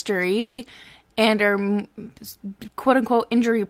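Packets were likely held up in transit long enough for the receiver's jitter buffer to run dry, producing a call audio freeze from 0.39 to 0.60 s in this speech. For about 190 ms the last sound is stretched into a fading buzz or hiss rather than cut to silence. When delivery resumes at "and are", the speech picks up exactly where it paused, nothing lost, but everything after arrives 190 ms later than it should.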